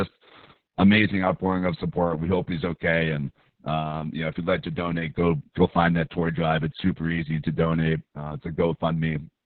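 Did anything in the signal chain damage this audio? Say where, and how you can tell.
Yes, at the codec stage: Opus voice compression in narrowband SILK mode cuts the speech off near 4 kHz, leaving it muffled, hoarse and robotic, which fits about 6 kbps.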